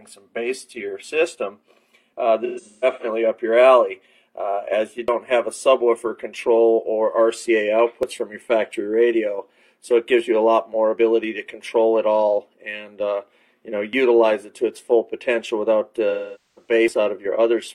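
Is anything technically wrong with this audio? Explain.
Yes. AAC frame loss with concealment occurs at 2.44–3.05 s and 16.09–16.71 s. The decoder patches the missing frames from the last good spectrum, giving smeared, phasey filler rather than a cut. The first patch is scattered, with runs up to about 150 ms.

Audio missing between chunks is heard at 5.08, 8.03, 13.93 and 16.88 s. Each is roughly a 50 ms skip with the two sides joined directly. The spacing fits a 3-second chunk, so the likely cause is material dropped at chunk boundaries. Unlike concealment, nothing fills these gaps.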